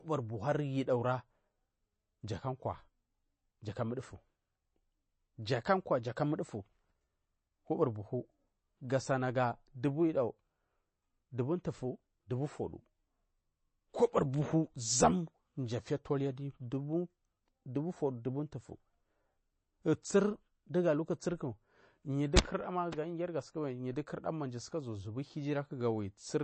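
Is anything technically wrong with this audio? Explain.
Yes. Throughout the speech, the sound is audibly watery and swirly, and nothing is present above about 8.3 kHz, so the top end is dull and s sounds lose their crispness. This is likely MP3 compression at a low bitrate, around 32 kbps. Short of bits, the encoder removed the treble at a fixed cutoff and zeroed weaker frequency lines, which switch on and off from frame to frame to produce that shifting, underwater texture.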